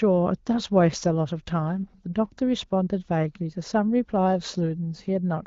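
Nothing in this speech clip stood out as a technical fault on listening.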